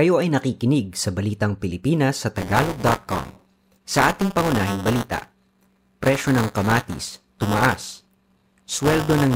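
From 2.37 s to the end, the speech carries buffer tearing. The writing program and the hardware reading the ring buffer have drifted out of step, so in every period a small slice, around a tenth, is replaced by audio from roughly 15 ms earlier, spliced in with hard edges. The result is a steady robotic rattle at 200 Hz, which points to a 5 ms period. The rattle appears only while there is signal. On a waveform the joins show as regularly spaced discontinuities. A spectrogram shows vertical striations every 5 ms, plus 200 Hz sidebands smeared around the voice harmonics.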